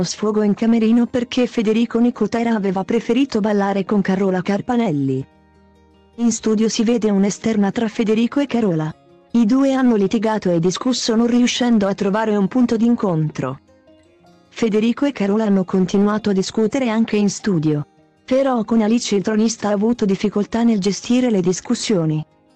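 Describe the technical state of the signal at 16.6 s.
At 16.6 s the signal is intact, with no audible technical fault at that point.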